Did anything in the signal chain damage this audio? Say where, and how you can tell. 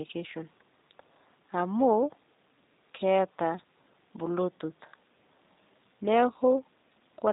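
Yes. Throughout the speech the sound is slightly rough and synthetic, with a buzzy, reconstructed quality, and nothing reaches above 3.8 kHz, so sibilants and airiness are gone. That is plainly audible G.729 codec damage at the codec stage. The decoder rebuilds each 10 ms frame from a vocal tract filter, a pitch predictor and a few pulses rather than the original waveform, which fits the G.729A variant at 8 kbit/s.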